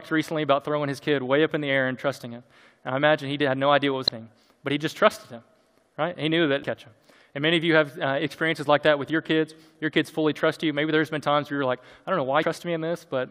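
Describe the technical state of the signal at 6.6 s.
From 6.63 s to 6.644 s, damaged data in the compressed stream makes the decoder misread a frame and resync, giving a brief glitch.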